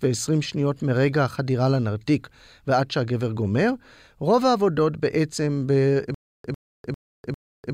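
At 6.14 s the speech breaks into a stutter with silent gaps that runs to the end: a 100 ms fragment repeats four times, each followed by about 300 ms of digital silence, on a 399 ms cycle. This likely comes from a stalled stream replaying its last buffered fragment on each retry, and the audio that should have played there is missing.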